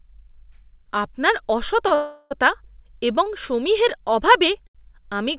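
Speech carried over a call link, with nothing above 4 kHz, which points to a G.711 mu-law narrowband path. It has three short stalls from late packets: at 1.88 s the sound is held about 26 ms, at 3.24 s about 20 ms just before "সমীহের অভাবে", and at 4.67 s about 78 ms just after "এবং সমীহের অভাবে". The jitter buffer ran dry, so the last sound was stretched until the packet arrived, and nothing was lost. On a spectrogram each stall shows as briefly smeared, flat harmonics, and the waveform shows a repeated, slightly buzzy cycle. A call audio freeze follows from 1.95 to 2.33 s: 360 ms of filled-in sound, likely caused by packets held up in transit, where the last sound turns into a fading buzz or hiss that never reaches silence. On the spectrogram this appears as a smooth, featureless band that gradually dims, and the waveform shows decaying noise before the speech resumes where it stopped.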